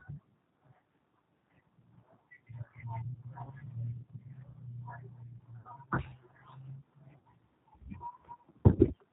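Throughout the speech, the G.729 codec is plainly audible: at 8 kbit/s, sound is rebuilt from a filter, pitch predictor and sparse pulses, giving a rough, synthetic edge. A spectrogram shows nothing above 4 kHz and smeared, grainy harmonics.

VoIP packet loss concealed by the speech codec occurs at 3.44–3.52 s, 5.61–5.69 s, 7.18–7.25 s and 8.75–8.83 s. Each gap of about 40 ms (60 ms at 7.18 s, which suggests three packets rather than two) is filled by stretching the last pitch and filter into a buzzy tone or coloured noise that fades. On a waveform this appears as a repetitive, decaying stretch, and in a spectrogram as a frozen, fading pattern, with weak, blurred speech just after each one.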